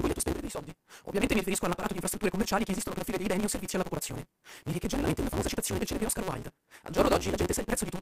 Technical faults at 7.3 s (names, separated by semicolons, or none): block size mismatch (truncated)